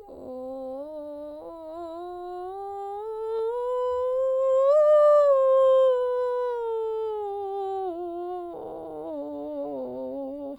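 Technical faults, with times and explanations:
No technical faults are audible.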